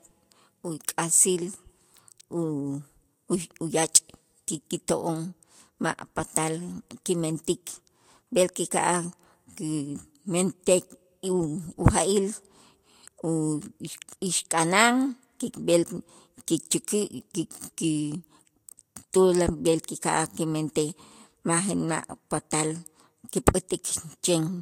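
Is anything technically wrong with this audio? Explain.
Yes. Throughout the speech, this is likely low-bitrate audio saved at a high bitrate: an earlier lossy encode, which fits Vorbis near 51 kbit/s, discarded detail that the later high-rate MP3 cannot restore, so nothing sounds above 16.6 kHz.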